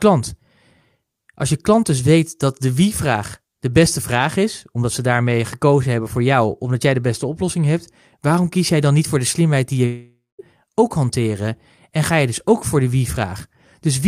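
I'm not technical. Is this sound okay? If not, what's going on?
No, not quite. Right after "de slimheid die je", at about 9.85 s, the speech smears into a fading buzz, then goes quiet until 10.41 s, when it resumes at "ook hanteren en ga" with about half a second missing. That's likely a long network dropout.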